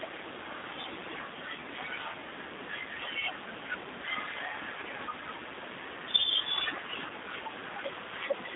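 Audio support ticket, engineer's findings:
G.729 codec damage throughout. Band limited to 250 Hz to 3.7 kHz, no highs. Rough, slightly synthetic texture, plainly audible. Sound is rebuilt from a vocal tract filter, pitch predictor and sparse pulses. Fits an 8 kbit/s G.729A stream.

VoIP packet loss concealed by the speech codec at 7.08 to 7.13 s. About 20 ms of audio missing, which fits a single lost packet. Decoder extrapolated from its last pitch and filter, with a brief stretched, fading fill. Recovery smears past the gap because each frame builds on the last.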